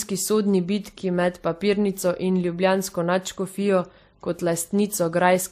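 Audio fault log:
Throughout: transcoding between lossy codecs. Nothing is present above 15.2 kHz. Smeared, watery artefacts from a low-rate first encode sit under a second codec's own distinct grain. This likely points to a roughly 42 kbit/s MP3 re-encoded to WMA 1 at around 96 kbit/s.
3.85–5.52 s: video or display buzz. A steady 50 Hz buzz, matching a picture field rate, enters with hash above it and a very high tone at 15.6 kHz from the line scan. It sits roughly 30 dB below the speech and runs to the end.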